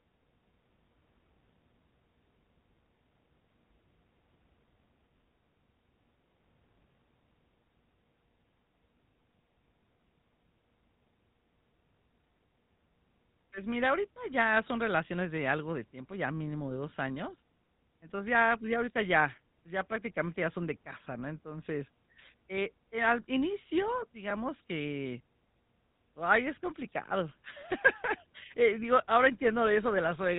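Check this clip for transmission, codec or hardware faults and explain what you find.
Yes, there's one fault, throughout: GSM full-rate codec, at about 13 kbps. Pulse-driven excitation and a 4 kHz ceiling leave the speech buzzy, gravelly and dull up top.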